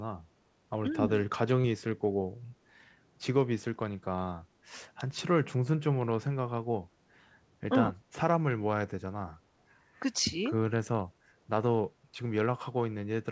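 At 1.62 to 1.66 s the speech briefly smears or wobbles. This is short concealed packet loss: about 20 ms of audio reached the decoder too late, so the receiver extended the preceding sound across the gap and blended back into the real signal, all within the call path's 8 kHz bandwidth.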